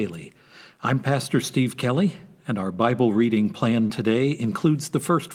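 At 3.87 s, just after "reading plan", a short concealed packet loss lasting 20 ms blurs the speech into a brief smear. The receiver patched the gap by extending the preceding sound. On a spectrogram, harmonics stretch flatly across that slot. The waveform shows repeated cycles that then blend back in.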